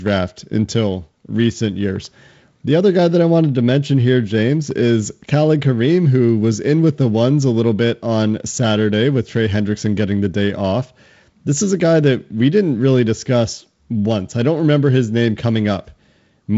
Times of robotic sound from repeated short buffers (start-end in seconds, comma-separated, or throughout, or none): none